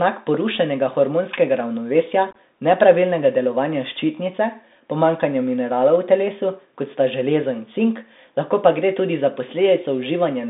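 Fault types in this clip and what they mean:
Bluetooth CVSD headset codec: speech confined to about 200 Hz to 3.7 kHz, with scratchy s sounds and granular hiss from coarse one-bit steps, unlike a clean lowpass filter.
Unconcealed Bluetooth headset packet loss: from 2.31 to 2.36 s, about 34 ms drops out in short hard-edged holes, longest 18.8 ms, rather than smoothly filled or smeared gaps.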